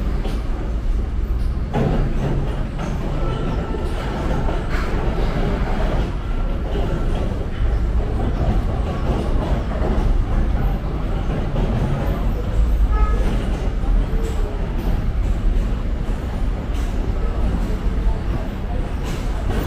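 No technical faults are audible.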